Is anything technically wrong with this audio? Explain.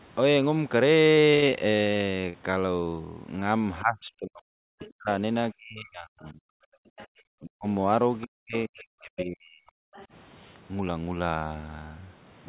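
Yes. The speech has several call-path faults. The whole clip is band-limited to 4 kHz, which fits a narrowband G.711 call.

A burst of packet loss runs from 1.35 to 1.44 s. About 80 ms of speech never arrived. The receiver held the last sound for 73 ms and faded it. You hear a brief held buzz or hiss, then speech resumes with a piece skipped.

Short concealed packet loss occurs at 1.50 to 1.53 s, 2.21 to 2.25 s and 2.29 to 2.36 s. Each gap is 20 to 40 ms long. The decoder patched each one by extending the preceding sound. The result is a quick smear or wobble, and a consonant can disappear.

Speech suppressed in double talk covers 3.82 to 6.47 s, 7.39 to 7.66 s and 8.24 to 9.86 s. The likely cause is an echo canceller that could not separate the talker from loudspeaker echo. It ducked both, so the voice dips by up to about 40 dB or breaks up.

The other side's voice leaking through is heard at 4.82 to 4.91 s, 6.98 to 7.07 s, 9.17 to 9.26 s and 9.96 to 10.06 s. 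The likely cause is residual loudspeaker echo the canceller missed. These are faint scraps, about 25 dB below the speech. The one at 9.17 s is louder, only about 10 dB down.

Background gated by the echo canceller appears from 6.75 to 7.11 s. While the loudspeaker played, the canceller clamped the microphone. The room sound drops by about 40 dB for roughly a third of a second, then returns.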